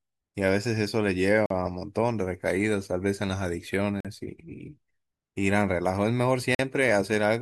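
Gap between chunks at 1.46, 4.00 and 6.55 s: the speech stops for 44 ms each time. The silences fall about every 2.5 s, where chunks join, and sound like short holes.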